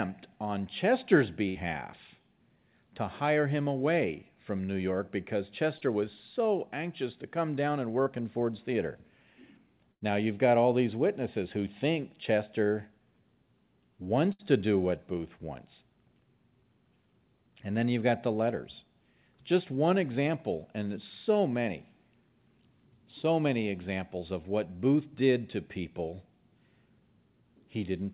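At 1.49 to 1.58 s there is a burst of packet loss. Roughly 60 ms of the stream failed to arrive, so the receiver stretched the last sound it had for about 61 ms while turning it down, then resumed further on with that stretch of speech gone. It is heard as a held, fading buzz or hiss followed by a small jump in the speech.

At 5.78 to 5.84 s and again at 8.03 to 8.09 s, short concealed packet loss fills gaps of about 30 ms each with a continuation of the preceding sound. These come across as a quick smear or wobble rather than an audible hold.

Two more bursts of packet loss follow. At 9.92 to 10.04 s, about 90 ms is missing, and the concealment tail runs for about 88 ms. This is the longest fade-out before the speech skips ahead. At 14.33 to 14.42 s, a loss of about 60 ms is covered by roughly 62 ms of decaying buzz or hiss.

Throughout the clip the call path removes everything above 4 kHz, which fits G.711 mu-law at 64 kbps.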